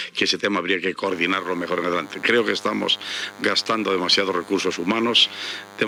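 DECT cordless phone buzz begins at 1.08 s and continues to the end of the clip. A DECT handset or base station close to the recording chain is transmitting a brief radio burst every 10 ms, and the audio circuitry rectifies each burst into the signal path. The result is a constant, thin buzz repeating at 100 Hz and carrying a dense stack of harmonics, sitting roughly 20 dB below the wanted sound throughout.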